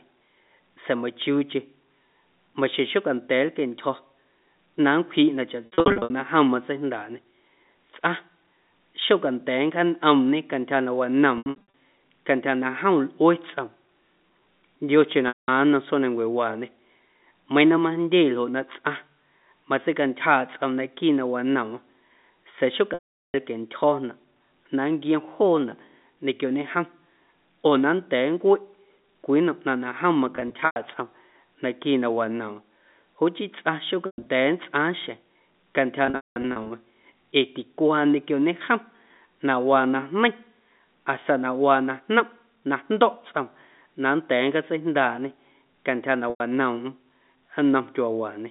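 Packet loss with pitch repetition turns up eight times in this narrowband G.711-style speech: 5.66–6.10 s, 11.38–11.67 s right after "cantyja na", 15.28–15.48 s just before "nnom tsjoomnancuewaañe", 22.94–23.34 s, 30.36–30.76 s, 34.06–34.26 s, 36.06–36.70 s, and 46.30–46.40 s after "nncjaatseijndaaꞌñê cantyja na". Each time, chunks of audio went missing and the receiver papered over the holes by looping the last pitch cycle. The scattered gaps give a brief buzzy hold. The solid 400 ms hole at 22.94 s and the 200 ms run inside 36.06 s fade toward silence before speech cross-fades back in.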